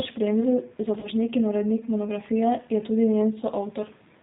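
Speech coded with the G.729 codec at 8 kbit/s throughout, so nothing above 4 kHz survives and the voice has a plainly rough, synthetic edge. At 1.00 to 1.08 s, VoIP packet loss concealed by the speech codec fills a 30 ms gap, which fits one lost packet, with a fading extrapolation that leaves the following frames weak or distorted while the decoder recovers.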